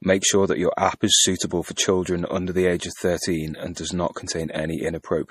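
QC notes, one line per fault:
Throughout: MP3 compression. The speech has a hard ceiling at 15.1 kHz, with nothing above it, and a plainly audible watery, swirly quality on sibilants, where faint high-frequency detail flickers in and out. This is likely a bitrate-starved encoder, consistent with something near 40 kbps, discarding the treble and zeroing weaker spectral lines frame by frame. On a spectrogram this appears as a flat cutoff edge plus patchy, blocky holes that blink on and off in the upper bands.
1.49, 1.75–1.77, 3.74–3.77: pre-echo. Before each of these three sharp onsets, a brief hiss leads in by roughly 15, 24 and 21 ms respectively, and the attacks sound softened. The codec spreads quantisation noise across its whole transform block, so noise sized for the loud onset also fills the quiet gap just before it. On the waveform, low-level fuzz rises ahead of each transient; on a spectrogram, a broadband smear precedes the attack's vertical edge.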